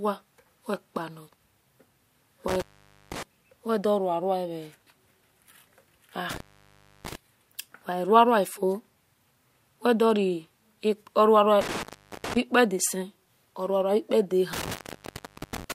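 Intermittent contact breaks the speech four times: 2.48–3.23 s, 6.30–7.15 s, 11.61–12.37 s and 14.53–15.72 s, with the line open for 0.50, 0.65, 0.41 and 0.78 s. A loose plug or cable briefly loses connection, so the signal drops to faint hiss, bracketed by crackle as the contact scrapes open and closed. On the waveform each gap is a near-flat stretch between spiky edges. The spectrogram shows broadband vertical streaks at the boundaries around a dim, low-level band.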